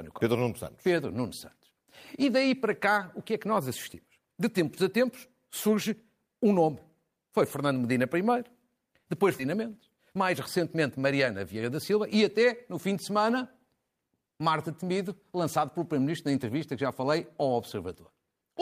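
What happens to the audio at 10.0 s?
At 10.0 s you're inside a jitter buffer speed-up running from 9.55 to 12.16 s: the receiver snips out short pitch-period chunks again and again, trimming about a fifth of a second. Speech plays roughly 8% fast at unchanged pitch, sounding hurried until "até no fim de".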